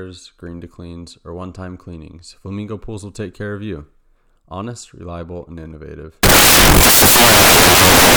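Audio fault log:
6.23–8.16 s, samples built from the wrong bytes: from 6.23 s to the end of the clip the speech is replaced by loud, harsh broadband noise. Each sample's bytes are being assembled out of order or misaligned, so the rapidly fluctuating low-order bits land in the high-order position and dominate every value. Unlike ordinary hiss or a dropout, the noise is loud and harsh.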